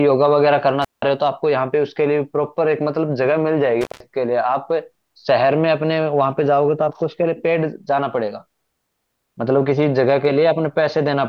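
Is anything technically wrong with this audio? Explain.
Yes. There is intermittent contact at 0.82 to 1.02 s and 3.81 to 4.00 s, where a loose cable or plug briefly opens. The speech cuts out for about 180 ms and 160 ms, with crackle at each edge and faint hiss in the gap, unlike the clean silence of a digital dropout.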